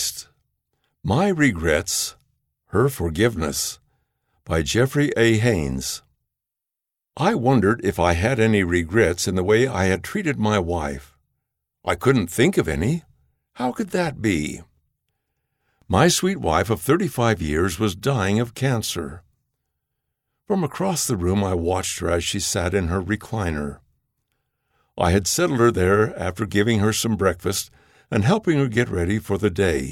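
No technical faults can be heard anywhere in the speech.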